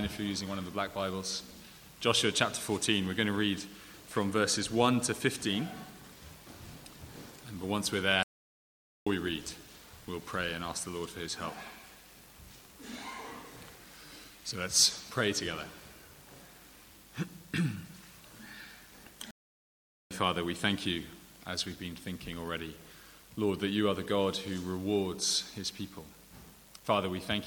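The audio drops out twice in a playback stall. The first runs from 8.23 to 9.07 s, about 0.83 s of silence. The second runs from 19.31 to 20.11 s, about 0.80 s. Each time the sound cuts off mid-flow and then returns. The gaps are clean silence, not noise or a glitch. The likely cause is the player running out of buffered data, or its audio thread being blocked, until output recovered.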